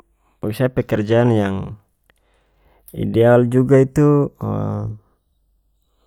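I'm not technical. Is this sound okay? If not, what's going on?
No. Channels drifting apart runs through the whole clip. The left and right sides of this speech were recorded by two devices whose clocks tick at very slightly different speeds, so one side slowly slips behind the other, ending up roughly a third of a millisecond late. When the two sides are combined, certain tones cancel, and those gaps slowly glide through the range of pitches, giving a swirling flanging sound over the voice.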